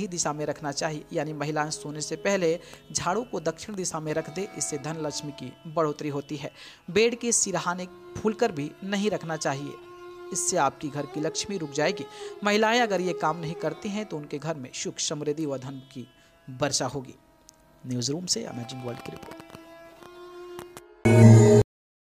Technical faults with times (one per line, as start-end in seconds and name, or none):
21.62-22.11 cut-off end